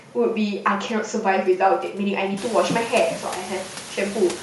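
Throughout the speech, the upper frequencies have a grainy, breathy edge, the plainly audible damage of Bluetooth LC3 compression, which is the likely cause. The codec works in short blocks, consistent with 10 ms frames, and at a moderate rate, perhaps around 48 kbps, it zeroes parts of the upper spectrum and fills them with noise. A spectrogram would show patchy, speckled high bands in place of clean harmonics. The room noise, which rises about 21 dB at about two and a half seconds to sit about 16 dB below the speech, shows as a thicker waveform floor.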